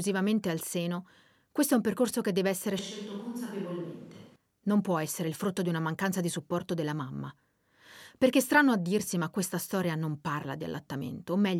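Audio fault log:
2.79–4.36 s, switch to a distant microphone: the close microphone's feed likely dropped out, leaving only a pickup much farther from the source. The speech turns abruptly roomy and hollow because the distant capsule hears more reflections than direct sound, and it loses its low end. The level falls by roughly 10 dB, and room noise rises to around 30 dB below the speech. At 4.36 s the close, full sound returns just as suddenly.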